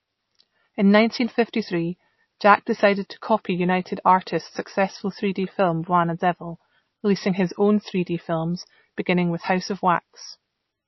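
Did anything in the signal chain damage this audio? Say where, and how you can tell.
Yes, throughout: heavy MP3 compression, likely at the codec stage. Nothing survives above 5.8 kHz, and the speech sounds watery as starved frequency lines flicker, which fits a bitrate near 27 kbps.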